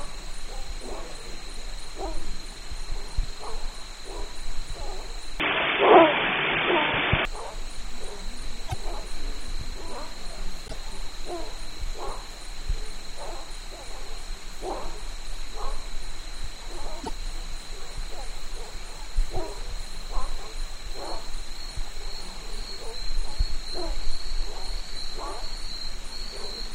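From 5.40 to 7.25 s the sound turns dull and boxy, likely an input switched to a poorer device: the spectrogram shows nothing above 3.5 kHz, the level shifts by about 5 dB, and a faint new noise floor sits roughly 45 dB down.

At 8.68, 10.67 and 17.03 s, brief glitches about 60 ms long, roughly two to three 24 ms frames, where the audio jumps ahead, likely come from a broken MP3 bit reservoir.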